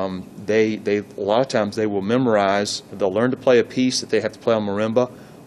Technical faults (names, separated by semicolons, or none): none